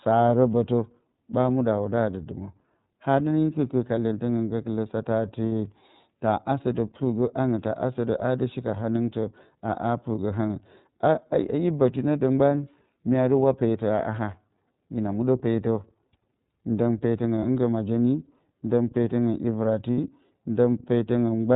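Throughout, the speech is band-limited at 4 kHz and sounds slightly rough and synthetic. This is the iLBC codec at plainly audible strength, and the bandwidth and texture fit its 13.33 kbps mode with 30 ms frames. Each frame's excitation is coded on its own, so clarity survives while fine detail is lost.

At 5.47 s, 17.40 s and 19.92 s, the sound briefly turns into a held, faintly buzzy, breathy vowel. These gaps last about 60 ms, 30 ms and 60 ms. They are lost iLBC frames: the decoder repeats the last pitch cycle mixed with noise to cover each gap. Because iLBC frames stand alone, normal speech returns almost immediately afterwards.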